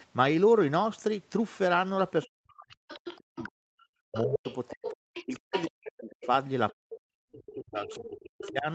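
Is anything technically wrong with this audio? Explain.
Yes. This speech clip has two kinds of echo-canceller fault, heard through a call path whose audio stops at 8 kHz.

Other side's voice leaking through occurs at 2.23–2.27, 2.89–3.47, 4.14–5.71, 6.11–6.26, 7.46–7.54 and 7.9–8.51 s. A second voice is audible, from about 25 dB to about 10 dB below the main talker and loudest at 4.14–5.71 s. This is likely loudspeaker playback that the echo canceller failed to remove from the microphone signal.

Speech suppressed in double talk spans 2.25–6.29 s and 6.77–8.68 s, with the talker's level repeatedly dropping, at worst by about 40 dB. The dips cover roughly three seconds and then roughly one and a half seconds. Both spans coincide with the leaked voice, so the canceller likely could not separate near and far speech and attenuated both.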